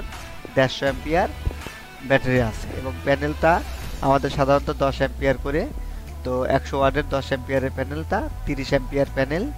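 At 1.47 to 1.69 s there's a loud pop, two sharp thumps well above the sound's level, likely a plug or switch voltage spike; the sound continues underneath.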